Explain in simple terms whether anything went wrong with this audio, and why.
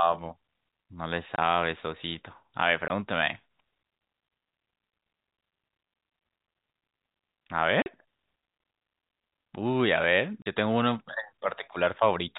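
The speech briefly drops out at 1.36–1.38, 2.88–2.90, 7.82–7.86 and 10.42–10.46 seconds. This is packet loss filled with silence: chunks of the call's data never arrived and were replaced by nothing, in gaps of 20 or 40 ms that fit 20 ms packets.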